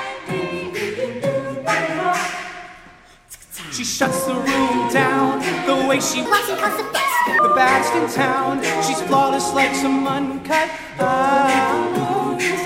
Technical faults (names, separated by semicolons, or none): section at the wrong speed